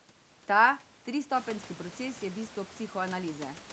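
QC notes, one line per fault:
No faults heard in this clip.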